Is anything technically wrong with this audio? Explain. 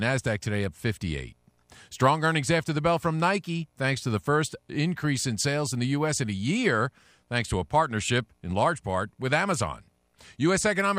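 Yes, there's one glitch: lost LE Audio frames from about 8.06 to 8.09 s. Roughly 22 ms of the speech goes missing, which fits three 7.5 ms frames dropping out over the Bluetooth LE Audio link. The LC3 decoder covers the hole by replaying the last good spectrum with its signs scrambled, so for that instant the voice smears into a short burst of noisy hiss instead of real speech.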